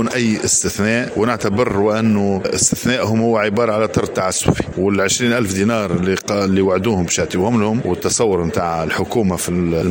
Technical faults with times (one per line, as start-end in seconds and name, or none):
none